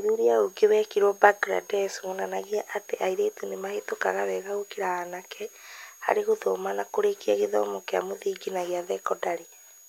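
A switching supply whistle runs through the whole speech clip, a high tone wandering between 6.54 and 6.72 kHz, about 25 dB below the signal, from a power supply cycling audibly.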